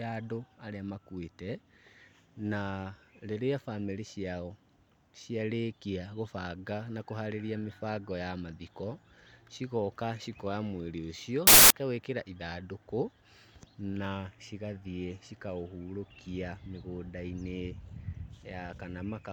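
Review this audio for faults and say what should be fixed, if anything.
From 11.47 to 11.70 s the speech is replaced by a burst of loud, harsh broadband noise, the signature of samples built from the wrong bytes. For about 0.23 s the reader assembled each sample with misaligned or swapped bytes, so the rapidly changing low-order bits became the dominant part of every value. Prevent it by checking byte order and sample alignment at every read or buffer boundary, and resynchronising on frame boundaries rather than trusting a running byte offset.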